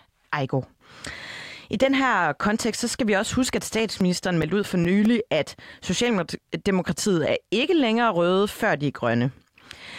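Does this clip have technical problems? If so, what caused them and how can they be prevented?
Yes. Just after "skal vi også huske", from 3.58 to 5.26 s, nine brief ticks, each only a few milliseconds long, recur at about five a second. These are CD scratch ticks: a disc blemish corrupts data beyond error correction once per rotation, and the player patches those samples. Clean or resurface the disc, or re-rip it with a secure ripper.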